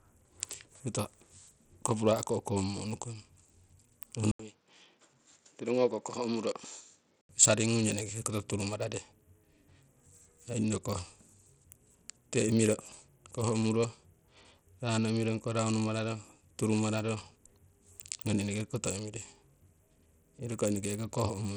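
From the start to the end, the speech carries plainly audible codec damage, likely from Bluetooth SBC compression. The treble thins and flickers. A gritty, rough noise rides on the voice. The top sub-bands seem to be starved of bits while the rest are coarsely quantised. The damage is heavy enough to point to a low bit pool, around 80 kbps.

At 4.31 s the input switches to a poorer device. An 80 ms silence marks the switch. The speech then turns dull and boxy. Nothing reaches above 7.6 kHz. The level drops a few dB, and a faint new background noise appears well below the speech. This most likely points to another microphone or a headset's call profile. At 7.29 s the original input returns and the sound clears again.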